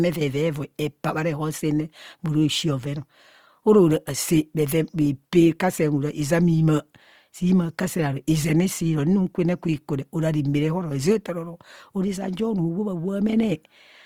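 A speech recording with codec damage that is plainly audible from start to finish: the sound has a rough, grainy texture, and tonal parts of the voice turn noisy rather than clean. There are no obvious holes or swirling, and the spectrum still extends to about 20.4 kHz. This is likely Opus compression in its CELT music mode, which fills starved bands with folded or noise content, and the level of damage fits a rate around 24 kbps.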